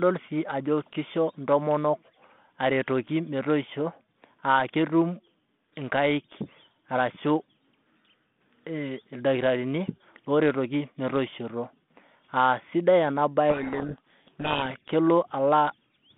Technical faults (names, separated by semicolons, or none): codec payload misread